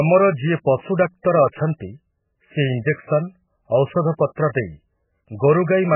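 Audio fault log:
Throughout, MP3 compression: the speech is heavily damaged, dull and watery, with nothing above 3 kHz and faint detail flickering. An encoder starved of bits likely cut the treble and dropped weak frequency lines, which fits a bitrate near 8 kbps.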